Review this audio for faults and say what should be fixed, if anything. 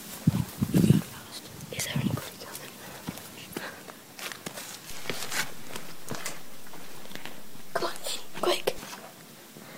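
There's a DC step at 4.91 s: the waveform's zero line jumps by about -34 dBFS and holds there until it drops back at 8.78 s. You get a low thump at each edge while the sound carries on unchanged. Worth fixing with a DC-blocking high-pass filter or a mic offset check before recording.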